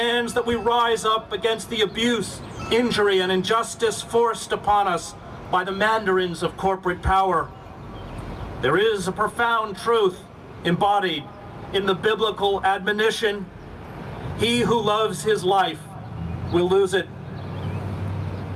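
Nothing goes wrong here at any point, so there's no fault to point to anywhere along the way.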